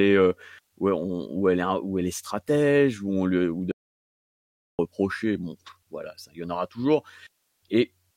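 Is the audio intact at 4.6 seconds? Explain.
No. At 4.6 seconds the clip is inside an audio dropout to silence running from 3.72 to 4.79 s, about 1.07 s in all. The input signal was likely lost for that stretch, perhaps through a disconnected device or a failed link, while the recording kept writing silence. The speech cuts off abruptly into silence with no room tone underneath, then resumes mid-flow, and whatever was spoken in that gap is gone.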